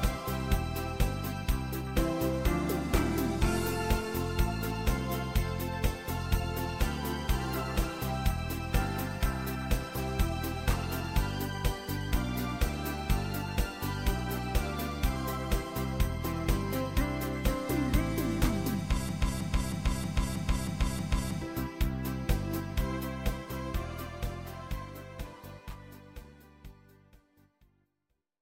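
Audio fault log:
19.09–21.41 s broken-record loop: a 0.32 s fragment plays seven times back to back, each pass identical, so the sound locks into a rigid pulse of about three repeats per second, and whatever should have sounded in that span is missing. The likely cause is a stalled player or stream re-sending the last fragment it held. Unlike echo, the repeats neither fade nor overlap; unlike a brief stutter, the loop persists for over two seconds.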